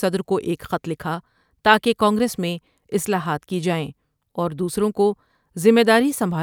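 Nothing stood out on listening to this speech recording.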